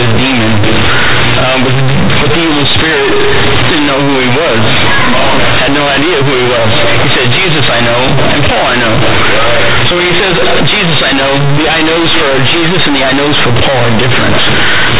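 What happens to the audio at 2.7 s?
At 2.7 s you're hearing companded audio read as linear, and it runs through the whole clip. The mu-law bytes are played as plain 8-bit samples without expansion, so quiet sound blows up to be as large as loud sound. Expect loud, buzzy distortion and heavy noise in pauses.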